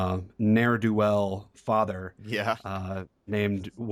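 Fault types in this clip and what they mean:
Listening to the speech here, nothing stood out as a technical problem.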